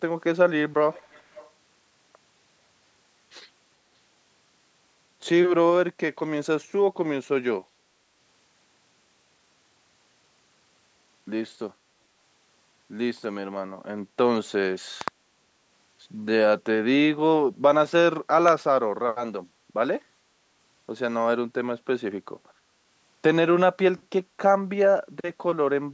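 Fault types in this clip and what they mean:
Echo leak: From 0.91 to 1.51 s a faint, delayed copy of the speech trails the original by 440 ms, sitting roughly 25 dB below it. The likely cause is a far-end loudspeaker whose echo canceller let part of its microphone pickup through. On a spectrogram the harmonic pattern of the speech reappears shifted 440 ms later and much dimmer. On the waveform a small secondary envelope follows each syllable.
Loud pop: A pair of sharp pops falls between 15.01 and 15.10 s, and a single pop follows at 18.48 to 18.50 s. Each peaks around 15 dB above the surrounding speech, which continues underneath. This is likely a sudden voltage step or pulse, such as from a plug, switch or static, entering the chain. The waveform shows tall, narrow spikes, and the spectrogram shows thin vertical broadband lines.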